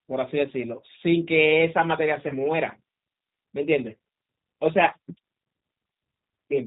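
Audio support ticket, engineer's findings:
G.729 codec throughout: speech band-limited below 4 kHz, slightly rough and synthetic texture, consistent with 8 kbit/s pulse-based coding rebuilding speech from filter and pitch predictor.

VoIP packet loss concealed by the speech codec, 2.28–2.32 s: brief fading smear where the decoder extrapolated across a 20 ms gap, which fits one lost packet.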